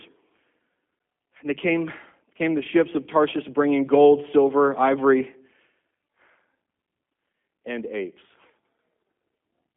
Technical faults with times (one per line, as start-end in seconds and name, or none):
0.00-9.76 G.729 codec